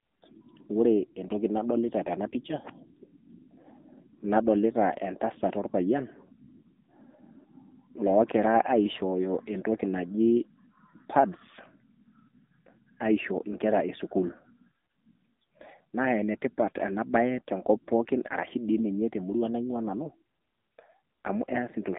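From start to finish the speech carries the damage of the AMR narrowband mobile codec, the AMR-NB coder used on 2G and 3G phone calls. The line passes roughly 200 Hz to 3.6 kHz, so the chest weight below and the sibilant air above are both missing. The coder rebuilds the voice from a vocal-tract model excited by sparse pulses, and the plainly audible buzzy, synthetic edge fits one of its lower modes, around 7.4 kbps.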